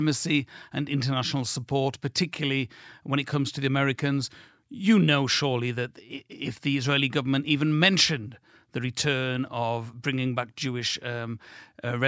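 A careful listen to this speech recording turns up nothing that stands out as a technical problem.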